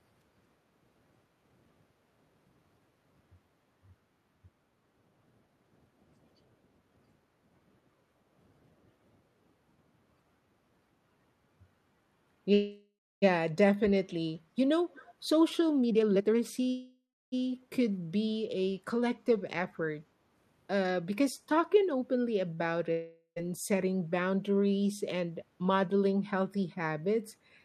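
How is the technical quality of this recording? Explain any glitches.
The recording has a fair number of network and echo-control glitches, mostly clustered between about 5 and 23 seconds.

Between 5.58 and 9.43 s the background is gated by the echo canceller, at 5.58–5.71, 5.88–6.01, 6.81–6.93, 7.80–8.37, 8.74–9.05 and 9.24–9.43 s. While the far end's loudspeaker was active, the canceller pulled the mic down by about 6 to 7 dB each time. You hear the room tone dip briefly and come back once it releases. The longest dip is around half a second.

At 12.53–13.24 s and again at 16.70–17.34 s there's a call audio freeze. The last bit of sound gets drawn out into a fading buzz, then about 0.3 s of silence, before things pick up exactly where they left off. Nothing is lost, but roughly 0.69 s and 0.62 s of gap get inserted. That points to the jitter buffer running dry while packets were held up in transit.

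From 14.94 to 15.10 s there's a faint echo leak, a delayed copy trailing the speech by 255 ms and sitting well below it in level. It's likely a loudspeaker on the other end whose echo canceller didn't scrub everything its mic picked up, so a scrap got sent back.

Two jitter buffer speed-ups follow. From 15.81 to 16.68 s the audio runs at 162% speed with the pitch unchanged, and it sounds noticeably rushed. The receiver was trimming tiny pitch-period slices over and over to shed about half a second of built-up delay. The one at 19.36–20.12 s is much gentler, at 107%, and it still sounds a little hurried, though only about 70 ms was dropped.

At 22.54–22.60 s there's a short stall from a late packet. One packet wasn't there when it was due, so the receiver held the current sound about 37 ms too long. The sound hangs on a touch too long, and then it continues with nothing missing.

Right after, at 22.92–23.38 s, comes a long network dropout. 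The sound smears into a fading buzz and then a brief silence of about 90 ms. When audio returns, about 440 ms has simply been skipped. It's likely a stretch of packets that never arrived at all, rather than arriving late.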